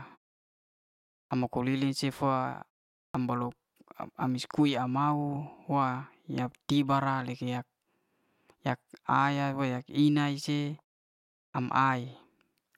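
Clipped start after a pause at 1.26, 3.10 and 11.50 s in this speech: after silences of 1.17, 0.48 and 0.74 s, the output device wakes late, so 42 to 48 ms of each onset is lost and speech begins abruptly, missing its first sounds.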